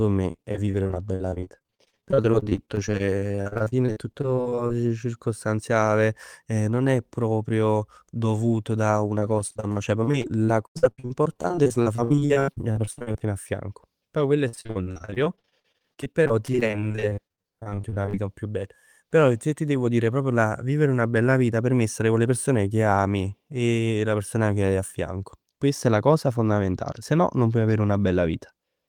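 From 0.31 to 4.71 s, 9.19 to 13.22 s and 14.48 to 18.17 s, the speech suffers repeated packet loss (robotic sound). Dozens of holes, up to 91 ms, are patched by extending the previous sound, so about a third turns choppy instead of dropping to silence.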